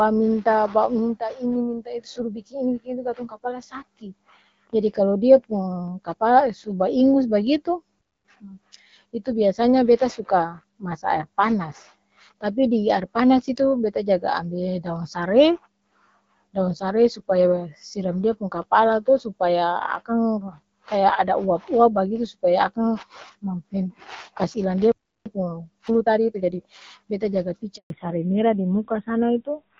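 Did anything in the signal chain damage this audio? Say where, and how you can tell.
Yes. The first fault is at the playback stage: two playback stalls, likely caused by the player's buffer running dry or its thread being blocked. Right after "kapala su baingos bagitu" the output goes silent from 7.99 to 8.25 s, about 260 ms, and after "kas ilang" it drops out again from 24.92 to 25.26 s, about 340 ms. Each time the sound halts mid-flow and then resumes.

Each stall is followed by a time-compressed catch-up, where the player works off its backlog by cutting out short slices and cross-fading the remainder. From 8.25 to 8.49 s the speech runs at twice normal speed. From 25.26 to 26.60 s it runs at 1.25 times speed. Pitch stays normal in both stretches, but the delivery sounds hurried.

The network stage causes a handover gap from 27.76 to 27.90 s. While the call moves to another network, no speech frames arrive. 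The speech fades out within a few tens of milliseconds and stays silent for 140 ms until the new link carries audio. Whatever was said during that switch is lost rather than delayed, so it never comes back later.

At the codec stage, right after the handover, there is a fallback to narrowband from 27.90 s to the end. Before that point the speech has the full HD Voice band with only light coding damage, which fits AMR-WB at around 12.65 kbit/s. After it, nothing reaches above 4 kHz, and the speech turns duller and rougher, which is consistent with AMR-NB at roughly 7.4 kbit/s.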